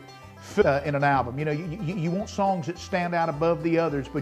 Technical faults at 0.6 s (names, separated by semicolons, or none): skip ahead